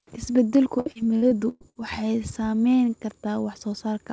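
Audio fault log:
0.80–1.78 s repeated packet loss (robotic sound): six gaps, the longest 118 ms, filled by extending earlier sound, so speech turns choppy. Spectrogram shows smeared, repeated frames and breaks.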